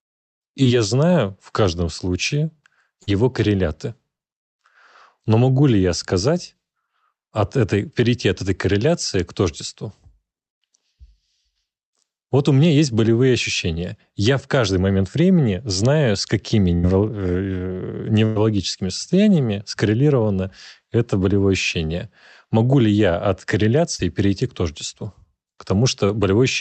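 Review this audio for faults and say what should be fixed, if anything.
Short concealed packet loss occurs at 0.63 to 0.67 s, 3.03 to 3.09 s, 4.17 to 4.21 s and 23.95 to 24.01 s. In each case, between 20 and 40 ms of the speech arrived too late or not at all. The decoder patched each hole by extending the preceding sound for 15 to 44 ms before blending back into the real signal. The patches are heard as brief smears or wobbles, and the longest ones, at 3.03 s and 23.95 s, can swallow a short consonant. Forward error correction and a slightly deeper jitter buffer would let most of these packets be recovered before concealment is needed.

Bursts of packet loss occur at 16.75 to 16.85 s and 18.25 to 18.37 s, where 80 ms and then 100 ms of consecutive audio went missing. The receiver carried the last sound forward and faded it across the gap, which produces a held buzz on voiced sound and a dying hiss on the rest. 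The speech then picks up further along, with the lost stretch gone. Both bursts pass through the Opus path, whose 8 kHz bandwidth caps the high end. Spreading redundancy across packets or using a more stable network link would prevent these runs of consecutive losses.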